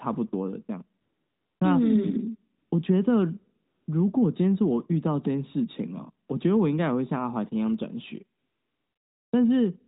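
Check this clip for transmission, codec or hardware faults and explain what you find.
Two faults are present: repeated AMR comfort noise in the pauses and one click from dropped samples, heard over narrowband mobile-codec audio capped at 4 kHz.

AMR comfort noise, at 1.02–1.60 s, 2.58–2.72 s, 3.66–3.88 s, 6.28–6.30 s and 8.40–9.32 s: the background becomes a smooth, steady hiss that switches in and out. The phone judged those gaps silent, stopped sending speech frames, and the receiver synthesised filler noise.

Dropped samples, at 7.74 s: a single sharp click, likely caused by a handful of samples going missing, so the waveform jumps abruptly to a later value.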